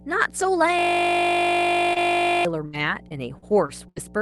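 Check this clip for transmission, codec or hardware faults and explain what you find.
The speech carries five distinct faults: a constant hum, a long hardware loop, a brief concealed dropout with a partly rebuilt packet, and a choppy stretch near the end. Above these, the spectrum stops at about 12 kHz, the normal band limit of the Opus call path.

Mains hum runs through the whole clip at 60 Hz, around 20 dB below the speech. A ground loop or a nearby transformer is feeding the power-line frequency into the signal chain. It sounds like a steady low drone under everything. On a spectrogram it is a thin, unbroken horizontal line at 60 Hz, possibly with faint harmonics above it. In the waveform it is a small, regular ripple riding along the baseline.

A system hang loop occupies 0.79 to 2.45 s. The computer or driver stalled while the audio hardware kept replaying the same ring buffer, so one 20 ms slice repeats over and over, which fits a 20 ms buffer. 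Cycling at 50 Hz, it becomes a flat, steady buzz in place of the speech. On a spectrogram it appears as rigid vertical striping with harmonics spaced 50 Hz apart. The waveform shows an identical, perfectly periodic block.

A short concealed packet loss falls at 1.93 to 1.98 s, with about 20 ms of audio missing. The receiver covered the hole by extending the preceding sound and then blending back in, which produces a brief smear or wobble. On a spectrogram this looks like a short, smoothed patch where the fine detail is repeated rather than new. The waveform shows a slightly too-regular stretch with no actual gap.

A lost packet rebuilt from error correction covers the final 20 ms of that event, 1.96 to 1.98 s. The next packet carried a low-bitrate backup copy of the missing one, so the decoder played that copy instead of leaving silence. The result is a moment of rougher, grainier sound with no dropout. 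On a spectrogram it appears as a slightly noisier, blurrier 20 ms column. The waveform stays continuous but looks a little coarser.

Repeated packet loss (robotic sound) runs from 2.66 to 3.98 s. Five separate gaps totalling about 240 ms are patched by concealment, the longest being 78 ms. Around a tenth of a second of that was restored from backup copies. Because the gaps come in quick succession, the speech turns choppy, with pieces missing. On a spectrogram there are repeated smeared, frozen-looking patches. The waveform shows uneven, stuttering segments.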